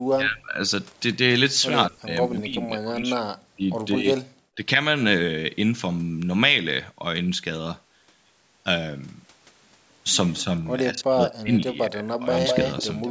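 Speech with the voice repeatedly pushed down, most likely speech suppressed in double talk by an echo canceller ducking both sides, at 0.11–0.59, 1.89–3.64, 3.97–4.07, 4.55–4.63, 10.39–10.49 and 10.92–12.27 s. The drops reach about 40 dB, seen as collapsed waveform envelopes and faded spectrogram bands. An echo leak, likely loudspeaker pickup the canceller failed to remove, returns a copy delayed by 206 ms at 12.33–12.84 s, only about 5 dB below the voice, and faintly again from 13.02 s. On a spectrogram it appears as a time-shifted ghost of the harmonics. The spectrogram stops at 8 kHz, within the call microphone processing band.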